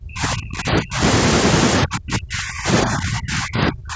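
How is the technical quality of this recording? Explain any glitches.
The recording has one recurring problem: the speech is pushed down in level in three stretches, from 0.0 to 1.02 s, from 1.84 to 2.68 s, and from 2.84 s to the end.

In each stretch the voice sinks by up to about 40 dB (about 35 dB in the last one). The likely cause is speech suppressed in double talk. While both sides were talking, the echo canceller could not tell this talker from echo returning through the loudspeaker, so it turned everything down. What separates this from packet-loss dropouts is that the echo canceller turns the level down, rather than audio going missing in transit.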